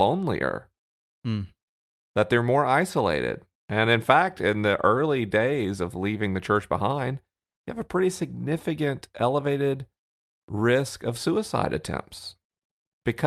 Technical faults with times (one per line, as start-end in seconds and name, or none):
none